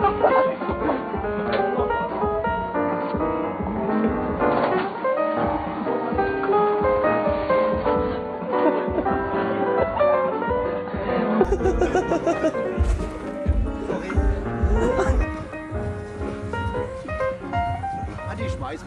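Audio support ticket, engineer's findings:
Input switched to a poorer device, 0.0–11.45 s: nothing above 4.5 kHz, then full band returns without a gap or level jump. Likely a narrower-band device, with low added noise.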